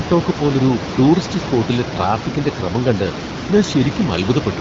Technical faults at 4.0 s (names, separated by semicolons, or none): none